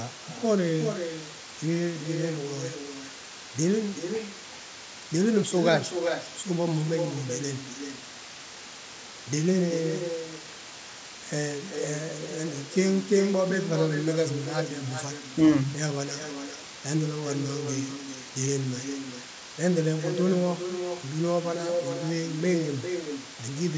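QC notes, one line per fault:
Throughout: low bit depth with dither. A constant, even hiss sits under the speech, about 15 dB below the signal, with no grit or harmonic distortion riding on the voice. This fits a 6-bit signal that had dither added before rounding, so the coarse quantisation error was turned into steady white noise instead of signal-dependent distortion. With so few bits the noise floor is high enough to be obvious in every pause as well as under speech.
0.09–23.58 s: echo leak. A delayed second copy of the speech follows the original by 386 ms, roughly 15 dB quieter, and persists for nearly the entire clip. The gap is long enough that the repeat is heard as a distinct trailing echo instead of added room colour. This is likely a far-end loudspeaker whose sound reached its microphone and was not fully removed by the echo canceller, so the residue was sent back into the call. 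The band stops at 8 kHz, consistent with the call path.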